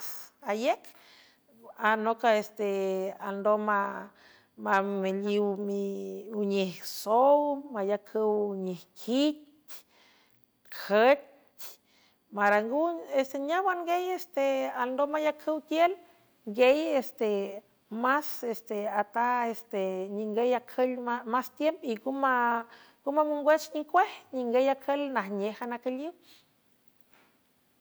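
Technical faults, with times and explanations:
4.73–4.78 s, 12.46–12.56 s and 23.97–23.99 s, hard clipping: on these speech peaks the level briefly exceeds what a stage in the chain can pass, by about 2 dB at the first two and about 1 dB at the last, so the waveform tops are sliced flat. The sudden flat edges add high harmonics, heard as short crackles on each peak rather than continuous fuzz, since the overload is slight and brief.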